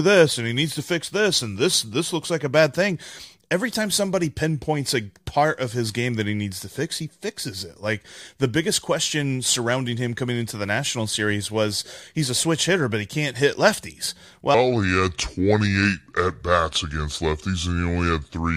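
From 14.55 s to the end, the speech falls into a section at the wrong speed. It plays at 0.736 times its recorded rate, so pitch drops about five semitones. Voices turn deep and drawn out. Playback against the wrong clock is the likely cause.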